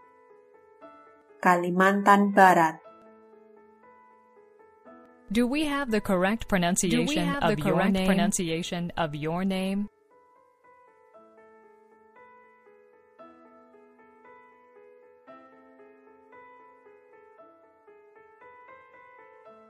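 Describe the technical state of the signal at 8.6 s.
At 8.6 s the signal carries a doubled audio track, running from 6.86 to 9.88 s: a second, full-band copy of the sound trails about one and a half seconds behind at roughly equal level, likely from a slower second capture path or misaligned edit. It sounds like a dry, overlapping repeat with no decay. On a spectrogram the patterns appear twice, offset in time; the waveform shows layered content that starts and stops abruptly at the span edges.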